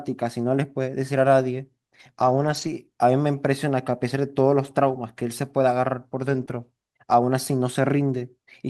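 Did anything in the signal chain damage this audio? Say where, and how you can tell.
Yes, the damage is at the network stage of a call, where packets went missing. One kind of loss was rebuilt from error correction, and one was concealed.

Lost packets rebuilt from error correction occur at 2.21 to 2.67 s, at 4.93 s, at 6.29 to 6.43 s and at 6.49 s. There are no gaps, but these stretches sound rougher and noisier because the decoder played the low-bitrate backup copy carried in the following packet. On a spectrogram the harmonics look grainier and less defined, with a hazy noise floor between them. The waveform stays continuous.

A short concealed packet loss runs from 6.45 to 6.49 s, squeezed between two rebuilt stretches. The receiver had nothing for about 20 ms and extrapolated from the preceding sound, then blended back into the real signal. It sounds like a brief smear or wobble.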